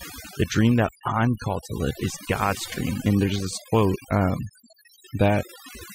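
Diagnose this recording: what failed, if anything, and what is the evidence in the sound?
Overdone noise removal in the call-processing stage: the suppressor pulls individual frequency bands far down whenever they sit near its noise estimate, taking quiet speech detail with them. Throughout the speech, the background drops and breaks up into twinkling specks.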